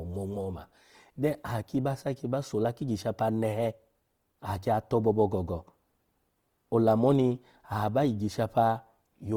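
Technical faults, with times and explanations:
Throughout: Opus compression. The speech sounds grainy and rough, likely from Opus in CELT mode at a rate fitting about 24 kbps, filling starved bands with noise or folded copies. A spectrogram shows energy up to 20.2 kHz, but with smeared, noisy upper bands.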